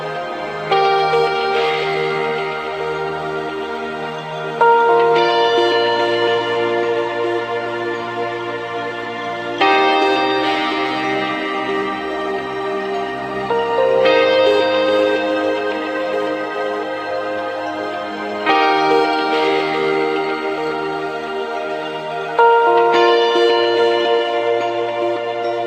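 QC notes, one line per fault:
No fault found in this clip.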